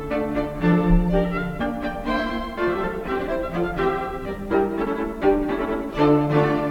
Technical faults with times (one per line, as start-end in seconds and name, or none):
0.00-6.71 low bit depth without dither